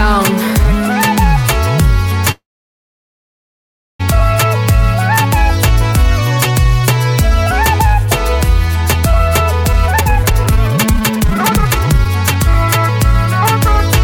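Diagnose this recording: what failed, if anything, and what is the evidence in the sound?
Network: a call audio freeze from 2.31 to 4.01 s, likely delayed packets. The last sound is stretched, then about 1.58 s of silence, and playback resumes exactly where it stopped, unlike a dropout, which loses audio.

Jitter buffer: a jitter buffer speed-up from 9.73 to 12.35 s, playing at 160% speed with unchanged pitch. Repeated removal of pitch-period slices cuts around 1.5 s, unlike resampling, which would raise pitch.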